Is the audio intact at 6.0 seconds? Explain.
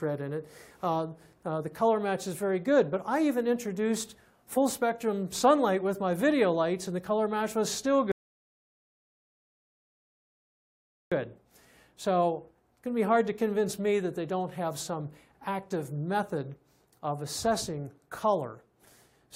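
Yes, the audio is intact at 6.0 seconds, with no dropout, click, distortion or other fault at that point.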